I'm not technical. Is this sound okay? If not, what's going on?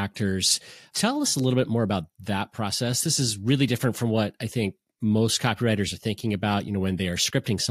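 Yes, it sounds fine.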